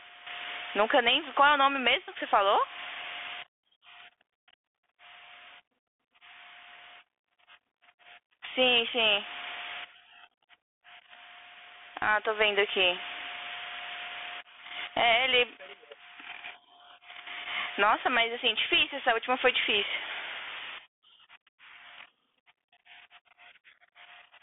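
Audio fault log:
throughout: gain pumping. The gain swings by about 15 dB, so loud and quiet parts sit squashed together. The likely cause is gain set far too high, with a fast limiter yanking it down on each peak.
throughout: Bluetooth CVSD headset codec. The speech is boxed into a thin 300 Hz to 3.5 kHz band with nothing above 3.8 kHz, s sounds turn scratchy, loud high content distorts, and a grainy hiss sits underneath. This fits a 64 kbps CVSD link, whose adaptive one-bit steps can't keep up with fast, bright sounds.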